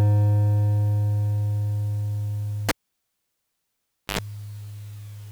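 At 2.69 s the music breaks off with a pop as a live cable is pulled and plugged in again. For about 1.45 s the signal falls to near silence. Then comes a burst of 50 Hz mains buzz lasting about 86 ms, as only the plug tip makes contact and picks up hum. A second pop ends the fault at 4.19 s and the music returns. That short buzz just before reconnection is what separates this from a plain dropout or mute.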